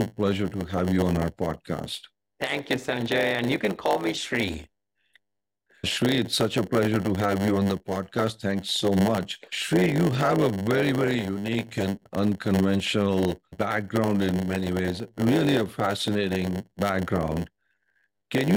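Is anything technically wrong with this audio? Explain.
Yes. Throughout the speech, a block size mismatch (padded) zero-fills each block's remainder, adding a 100 Hz buzz and slowing delivery to 0.919 speed at roughly normal pitch.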